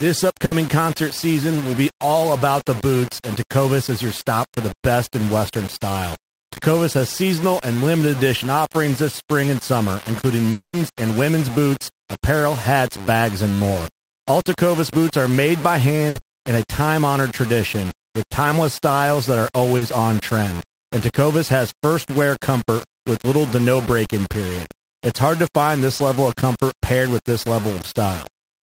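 Speech runs through the whole clip with a coarse, grainy distortion that follows the voice. Quiet passages turn gritty and break up. The error sits roughly 15 dB below the signal. The likely cause is low bit depth without dither, which fits rounding to about 5 bits. There are two bursts of packet loss. The first runs from 0.45 to 0.53 s, just before "concert season will be". The second runs from 16.09 to 16.17 s. Each time, about 60 ms of real audio is lost. The last sound is stretched into a fading buzz or hiss, and then the speech jumps ahead. From 10.51 to 10.75 s, a 220 ms stretch is missing. A fading continuation of the previous sound gives way to about 110 ms of silence, and then the speech resumes further on. This points to a likely long network dropout. Short concealed packet loss appears at 19.77 to 19.83 s, between "timeless styles that are" and "on trend", where 40 ms was lost. 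It appears again at 25.97 to 26.01 s, between "hard to find" and "level of comfort paired", where 20 ms was lost. Both gaps were bridged by extending the preceding sound, so each one is heard as a brief smear or wobble.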